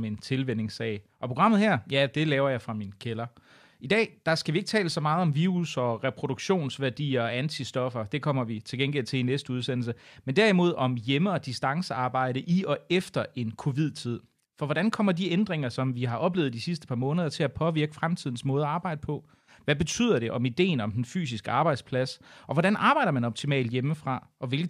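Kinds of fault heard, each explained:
Nothing stood out on listening to the speech that would point to a technical fault.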